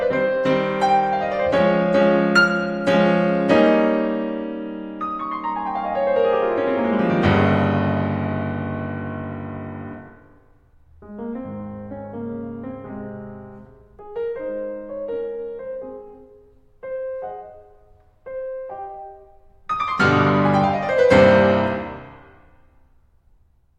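No technical faults can be heard in this music.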